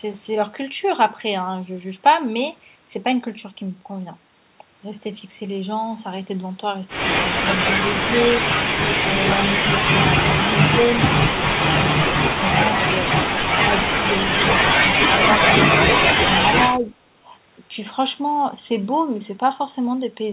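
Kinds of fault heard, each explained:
Speech suppressed in double talk: from 7.98 to 17.29 s the voice repeatedly dips or drops out in short pieces, from about 5 dB to about 35 dB, deepest near 10.5 s, likely an echo canceller turning the talker down while the far side also spoke.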